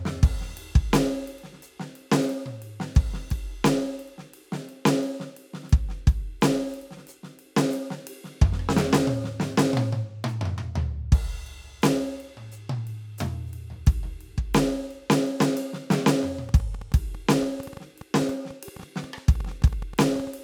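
From 16.49 s to 20.28 s there's a train of clicks, around nine per second at an uneven pace, some forty in all, each hitting about as loud as the music, so the ticking sits right on top. Likely cause: nearby equipment interference or a faulty connection or power supply.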